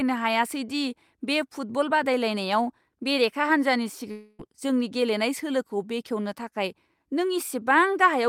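At 4.11 s, after "बेरेखा हान्जानि", the sound smears into a fading buzz until 4.42 s, then resumes at "जोंनि गेलेनाय" with about 280 ms missing. This long network dropout, likely from packets never arriving, differs from a brief glitch because the fill drags on without dropping to silence.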